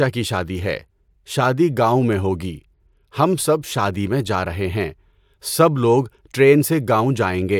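Nothing in the speech stood out as a technical problem on listening.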